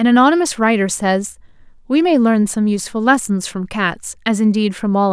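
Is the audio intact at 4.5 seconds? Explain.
Yes, the speech at 4.5 seconds plays through intact, with no dropout, click, distortion or other fault at that moment.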